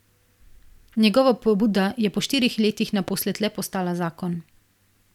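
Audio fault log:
3.08–3.10 s, loud pop: a single sharp pop, roughly 10 dB above the speech, which carries on underneath it. A sudden voltage pulse, likely from a plug, switch, static discharge or driver glitch, entered the signal path, and the circuitry after it shaped it into this brief burst.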